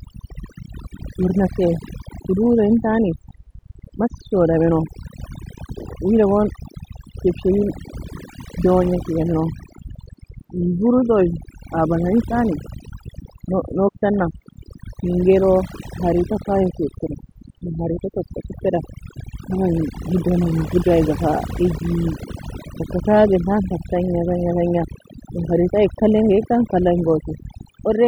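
A speech recording with overdone noise removal running for its whole length: the reduction is set so aggressively that frequency bands near the noise estimate are pulled down or cut, taking quieter voice detail with them, leaving near-silent gaps with twinkling specks.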